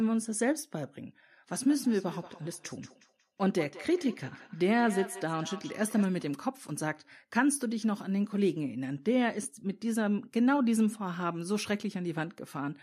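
Speech with a feedback echo between two devices from 1.57 to 6.1 s: the sound returns at roughly 200 ms intervals, peaking at about 17 dB below the speech. Another device on the same call is likely replaying this microphone's signal, which is picked up again and escapes local echo cancellation.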